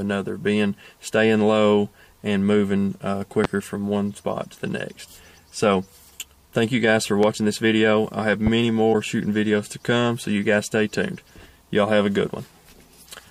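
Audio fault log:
3.44–3.47 s, 7.23–7.26 s and 8.47–8.50 s, loud pop: single sharp pops, about 15, 15 and 10 dB above the sound, which continues underneath. A voltage pulse is the likely cause.
8.90–8.95 s, damaged data in a compressed stream: a short glitch. The decoder misread corrupted frames and resynced to the next header.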